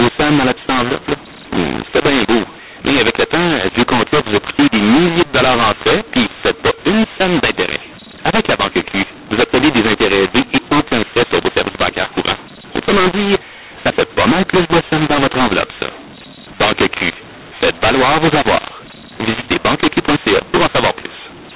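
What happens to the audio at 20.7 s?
At 20.7 s, as across the whole clip, mu-law and A-law are mixed up: mu-law-coded samples decoded as A-law scramble levels, making the speech harsh and filling pauses with noise.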